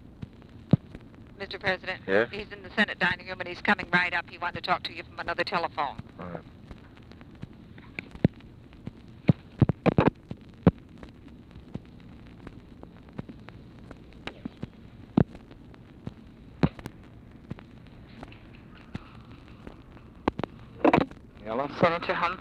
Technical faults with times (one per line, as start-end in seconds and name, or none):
6.35-6.37 loud pop
16.86-16.88 loud pop